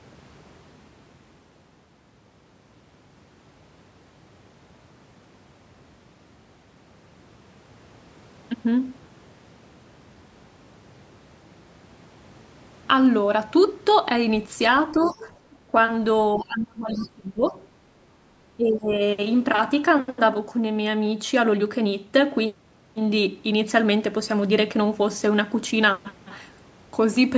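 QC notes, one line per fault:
14.95 to 18.94 s, other side's voice leaking through: A second voice breaks in at 14.95 to 15.2 s, 16.33 to 17.07 s, 17.62 to 17.67 s and 18.73 to 18.94 s. It sits roughly 15 to 35 dB below the talker. Likely residual loudspeaker echo the canceller missed.
14.97 to 18.92 s, speech suppressed in double talk: The talker's level sinks at 14.97 to 15.27 s, 16.35 to 17.55 s and 18.57 to 18.92 s. The drops run roughly 10, 25 and 15 dB. Each overlaps the leaking voice. The canceller likely mistook both talkers for echo and attenuated everything.
15.55 to 15.66 s, background gated by the echo canceller: The room sound dips by about 6 dB for roughly a tenth of a second, then returns. The canceller clamped the microphone while the loudspeaker was active. It released almost at once, so the gap is brief.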